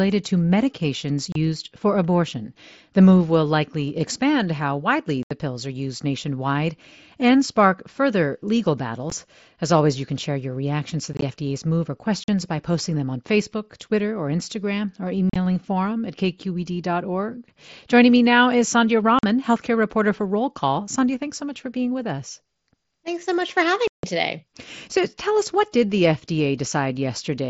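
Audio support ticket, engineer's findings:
Unconcealed Bluetooth headset packet loss at 1.32, 5.23, 9.1, 11.13, 12.24 (between "move or" and "by posting them on"), 15.30, 19.19 and 23.88 s (after "so much for"). Hard-edged dropouts of 15 to 158 ms. At 11.13 and 15.30 s they are scattered over 90 and 60 ms, giving a chopped crackle. Headset-to-phone link dropped voice frames and silence or an idle pattern was played in their place. Gap lengths step in about 7.5 ms units, fitting mSBC frames over a wideband link.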